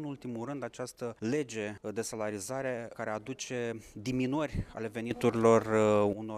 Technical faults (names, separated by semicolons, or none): sudden gain jump